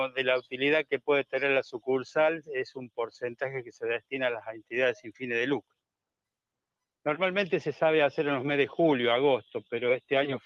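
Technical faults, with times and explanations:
Throughout: noise suppressor applied to music or sounds. A speech-tuned suppressor keeps treating sustained material as noise, so the level swings by roughly 10 dB.
0.41–0.57 s, 0.84–1.08 s, 2.71–3.18 s, 3.63–3.78 s, 4.49–4.73 s, 4.97–5.23 s: sound cut by the noise suppressor. Held or decaying parts get ducked hard, about 11 to 21 dB, so tails are cut short while onsets survive.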